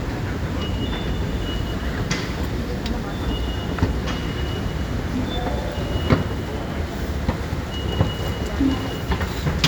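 Nothing in this recording of sounds points to a technical fault, with the signal holding steady and intact for its whole duration.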